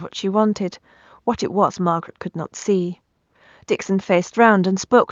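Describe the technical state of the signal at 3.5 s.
At 3.5 s the audio is intact, with only the room's own background noise sitting about 53 dB below the speech.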